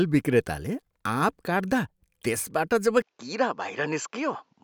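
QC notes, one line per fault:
3.02–4.63 s, input switched to a poorer device: at 3.02 s the speech abruptly loses its top end and turns duller, with nothing above 7.6 kHz through to the end. There is no gap at the change and the loudness stays about the same, but a faint new noise floor appears well beneath the speech. The likely cause is the recording jumping to a narrower-band microphone. On a spectrogram, energy stops at a hard ceiling from 3.02 s; the waveform's envelope shows no step.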